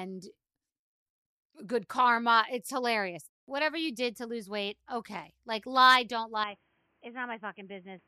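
Input switched to a poorer device at 6.44 s, after "lie don't", lasting to the end. Without any gap, the speech turns dull and boxy, losing everything above 3.2 kHz, drops about 5 dB and gains new background noise well below it, likely from another microphone or a headset's call profile taking over.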